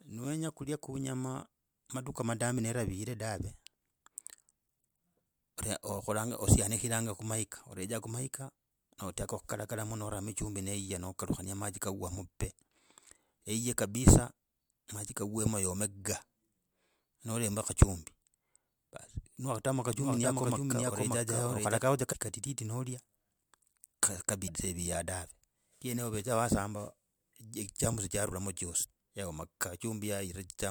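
Speech recording with two kinds of fault. From 19.96 to 21.78 s, just after "ni wakatamo", there is a doubled audio track: a second full-band copy runs about half a second behind at roughly equal level, dry and starting and stopping abruptly, likely from a slower second capture path or an edit holding two offset copies. Damaged data in a compressed stream then shows up as short glitches at 22.09–22.14 s (just before "kadidi nolya"), 24.44–24.50 s and 28.80–28.86 s, where the decoder misreads corrupted frames and resyncs.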